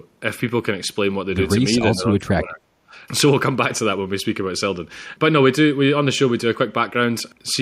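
From 1.95 to 2.94 s, an echo canceller likely failed to separate overlapping talk from loudspeaker echo and turned both down. The result is speech suppressed in double talk: the speech dips by about 25 dB at its deepest, for about 0.7 s in total.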